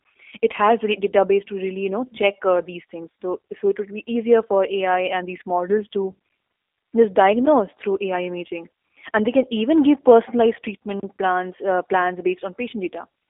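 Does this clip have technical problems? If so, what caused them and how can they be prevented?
Yes. The G.729 codec runs throughout: the speech sounds rough and slightly synthetic, and a spectrogram shows a hard ceiling near 3.7 kHz with almost no energy below 300 Hz, which fits a narrowband 8 kbit/s telephone link. To prevent it, record locally or use a wideband codec instead of G.729.

Two blocks of digital silence appear as near-silent stretches in the waveform. The first is a tick at 7.46 s, lasting about 11 ms, which fits a 512-sample buffer. The second is a 32 ms hole from 11.00 to 11.03 s, between "can even give personalized" and "plans uh plans". Both start and end with abrupt edges. This happens when the output buffer isn't filled in time. To prevent it, give the audio thread higher priority or use a larger buffer.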